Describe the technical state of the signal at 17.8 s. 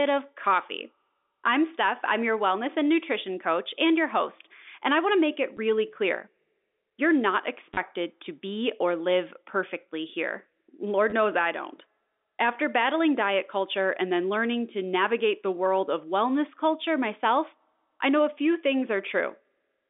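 At 17.8 s the speech is intact, with no fault to be heard, just the narrow telephone band of G.711 coding running as it does throughout, roughly 250 Hz to 3.6 kHz.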